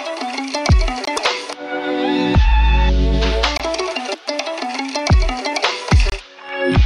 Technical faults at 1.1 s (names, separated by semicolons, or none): gap between chunks